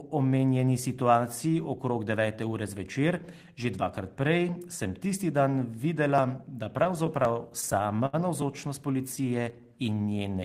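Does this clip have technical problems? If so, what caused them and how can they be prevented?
Yes. Between 6.77 and 8.15 s, packets repeatedly arrived late, so the jitter buffer kept running dry. This repeated stalls (stutter) fault produced 13 held-over gaps, the longest 73 ms, making the speech drag and stutter. A deeper jitter buffer or a more stable network path would prevent it.

From 8.93 to 8.97 s, a single late packet caused a short stall. The receiver stretched the previous sound by 15 ms, leaving a brief held tone. Smoother packet delivery would prevent it.

From 9.01 to 9.96 s, a jitter buffer slow-down rebuilt the reserve by repeating pitch periods. This added 92 ms and played the speech at 91% speed with unchanged pitch. Keeping a larger steady buffer margin would prevent it.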